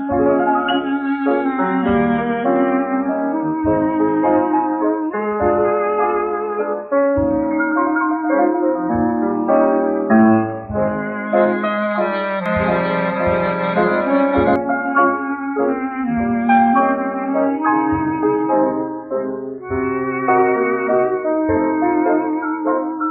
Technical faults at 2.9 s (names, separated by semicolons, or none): none